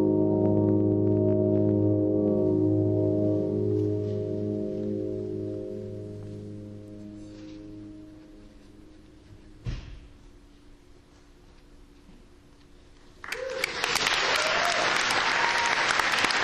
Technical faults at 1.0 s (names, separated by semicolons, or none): none